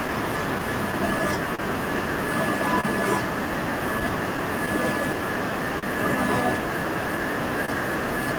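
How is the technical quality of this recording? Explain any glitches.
The recording has timing glitches throughout: a steady undercurrent of small hiccups, two clusters of brief smears, and two moments where the speech hangs for an instant.

Clock drift between sender and receiver runs through the whole clip as small, unevenly spaced stutters. The sender's clock runs roughly 3% slow, so the receiver's jitter buffer keeps draining and has to repeat small slices of audio to keep playing.

Scattered short gaps appear from 0.07 to 1.61 s (about five) and from 4.0 to 5.85 s (about seven). Each sounds like a quick tick or smear. Lost or late packets were covered by extending the preceding sound, roughly 70 ms per stretch, the longest near 40 ms.

Short stalls from a late packet occur at 2.81–2.85 s and 7.65–7.70 s, where speech is briefly held with a slight buzz or dip. Each time a packet arrived late, the buffer ran dry and the last sound was stretched 28 ms, with nothing lost but playback delay increasing by 28 ms.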